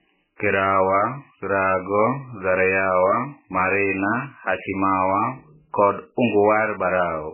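From start to end the speech has nothing above 3 kHz and a watery, swirling texture, likely from heavy MP3 compression at a bitrate as low as about 8 kbps. A plain low-pass filter would dull the sound evenly, but here weak frequency lines flicker between frames, smearing consonant attacks and adding that unsteady swirl.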